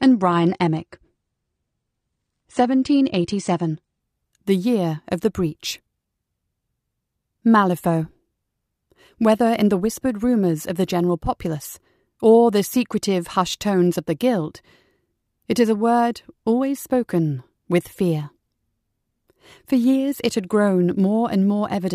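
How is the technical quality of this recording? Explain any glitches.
The quality is held back only at the start, by an adaptive stream starting at a low bitrate. From 0.0 to 4.0 s the player begins on a lean encoding, which fits roughly 32 kbit/s AAC, before measuring the connection and switching to a richer one near 96 kbit/s. Until then nothing sounds above 9.7 kHz, so the speech is dull and smeared. Clarity jumps abruptly, without a gap, just before "the year of the".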